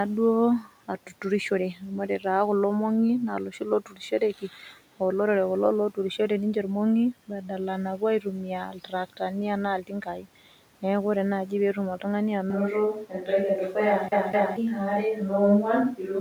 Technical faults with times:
0.63-1.12 speech cut by the noise suppressor
1.75-2.25 speech cut by the noise suppressor
3.51-4.54 speech cut by the noise suppressor
7.98-8.26 speech cut by the noise suppressor
8.68-9.21 speech cut by the noise suppressor
9.82-10.27 speech cut by the noise suppressor
12.50-16.20 switch to a distant microphone

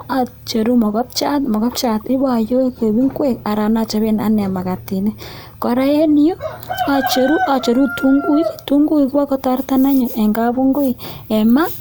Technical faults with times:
none

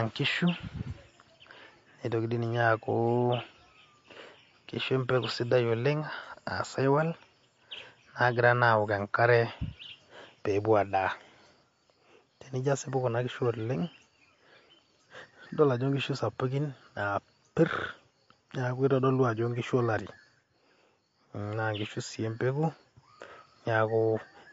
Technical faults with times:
0.00-24.53 MP3 compression

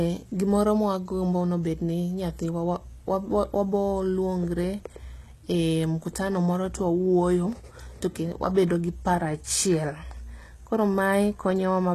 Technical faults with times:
0.00-11.94 HE-AAC compression

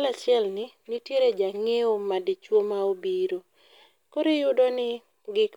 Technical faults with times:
none

